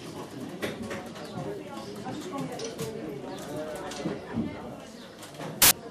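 File tags played as audio at 5.62 to 5.71 s: an embedded cover picture's compressed data is read as samples, giving a hard-edged burst of very loud white noise.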